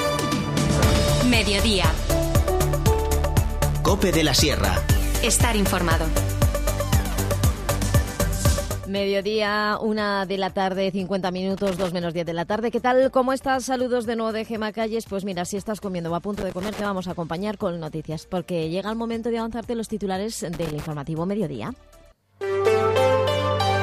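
A worn or dirty contact somewhere in the signal path is making and breaking, producing loose connector crackle: the audio is chopped into irregular bursts of scratchy crackle at 11.57 to 11.88 s, 16.38 to 16.86 s, and 20.53 to 20.86 s.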